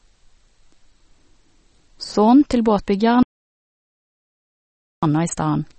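From the start, plainly audible watery, swirling speech points to MP3 compression, likely at a low bitrate around 32 kbps; spectrograms show nothing above 8.3 kHz and flickering gaps. From 3.23 to 5.03 s, an audio dropout to silence, likely lost input, removes about 1.8 s. The waveform goes flat, the spectrogram blank, with no room tone.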